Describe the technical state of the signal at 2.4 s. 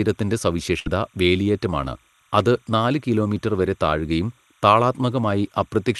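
Timecode bleed is present at 2.4 s, as it is through the whole clip. Linear timecode running at 29.97 frames per second has leaked in from an adjacent line, so a faint chirping warble between roughly 1 and 2 kHz sits about 40 dB beneath the speech.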